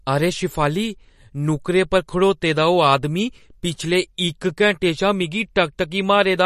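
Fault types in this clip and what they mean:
MP3 compression: The speech is likely MP3-encoded, and the damage is plainly audible. Starved of bits, which fits a low rate near 40 kbps, the encoder removes everything above 14.1 kHz and drops weak frequency lines that flicker on and off between frames, giving a watery, swirling edge to s sounds and smeared attacks. A spectrogram shows a flat ceiling at 14.1 kHz with speckled, patchy holes in the upper bands.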